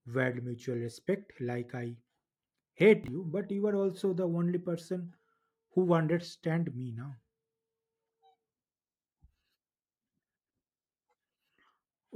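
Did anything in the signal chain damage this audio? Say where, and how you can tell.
Yes: at 3.04 to 3.08 s, just before "you but you are", chunks out of order in the buffer. A 20 ms block plays one chunk late, giving a jumbled blip but no missing audio, unlike a dropout.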